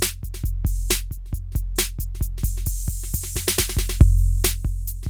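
Nothing in this music clip stands out as a technical fault; it just runs along the way it should, with nothing to flag.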